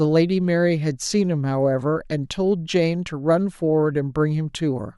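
Nothing in this bit of speech stands out as a technical fault, so there's nothing to flag here.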